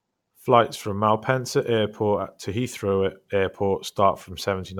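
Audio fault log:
throughout, generation loss: the speech was likely decoded and re-encoded through an MP3 chain roughly seven times, each pass quantising on a shifted frame grid, so errors pile up into swirly, hollow, smeared sound with blurred attacks, worse than 128 kbit/s alone would explain, nothing above 19.9 kHz.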